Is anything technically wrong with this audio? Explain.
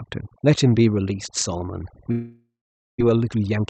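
Yes, there are three faults in this speech clip.

Overdone noise removal runs through the whole clip. The noise suppressor was set so aggressively that any frequency band close to its noise estimate was pushed far down or muted, and quieter parts of the voice were removed along with the noise. The background drops and breaks up into twinkling specks.

A long network dropout is heard from 2.11 to 3.02 s. The speech stops and is replaced by a continuation of the last sound, a buzz or hiss that fades, and the last part of the gap is silence. This is likely a stretch of packets that never arrived. When the speech returns, about 600 ms of audio is missing, and the timing has shifted by roughly 300 ms.

A jitter buffer speed-up follows from 3.10 to 3.64 s. The buffer was holding more audio than it wanted. To cut that backlog, the receiver repeatedly removed tiny slices, each one or a few pitch periods long, taking out about a tenth of a second in total. 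The speech plays at about 117% speed with its pitch unchanged, so it sounds hurried.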